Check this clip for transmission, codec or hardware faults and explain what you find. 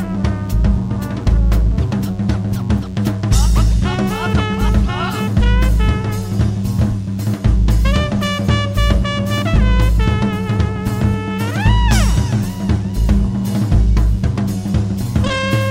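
There is one fault, present for the whole clip: DECT cordless phone buzz. A DECT handset or base station nearby transmits a short radio burst 100 times a second, and the audio circuitry rectifies each burst into a small click. Together they form a steady, thin buzz at 100 Hz with a dense stack of harmonics, sitting about 35 dB below the sound. A spectrogram shows evenly spaced horizontal lines at multiples of 100 Hz running edge to edge. A zoomed waveform shows a regular pulse train every 10 ms.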